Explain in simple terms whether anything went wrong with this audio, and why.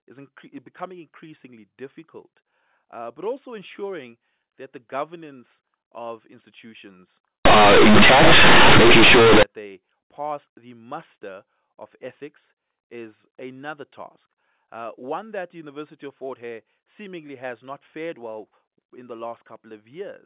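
From 7.45 to 9.43 seconds, the speech suddenly turns into a very loud, harsh buzz, with heavy noise even in the gaps, before the normal telephone sound returns. This is companded audio read as linear. The call uses mu-law telephone coding, which squeezes loudness onto a curved scale. For those two seconds the player treated the mu-law bytes as ordinary 8-bit samples, so quiet and loud parts come out equally huge and the waveform is badly distorted.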